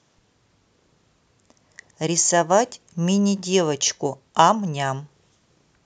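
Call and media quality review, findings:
No faults found on review of the speech clip; nothing requiring a ticket.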